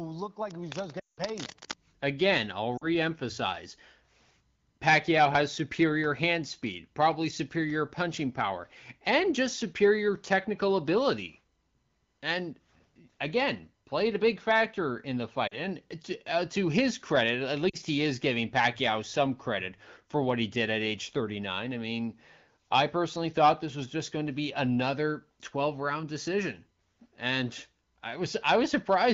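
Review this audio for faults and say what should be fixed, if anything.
Cable scratch noise runs from 0.49 to 1.74 s, a rough rustle about 10 dB below the speech. A worn cable or connector shifting and changing its contact resistance is the likely cause. A spectrogram shows ragged broadband streaks, and the waveform shows spiky fuzz. Reseat or replace the cable and secure it against movement.

Lost AMR speech frames occur at 0.99 to 1.20 s, a 180 ms gap inside the scratching, and for about 40 ms each at 2.78, 15.48 and 17.69 s. The AMR-WB decoder reuses its last good settings at falling gain, smearing then fading the sound. Spectrograms show blurred bands dimming out, and waveforms show a shrinking envelope. Improve radio coverage to prevent it.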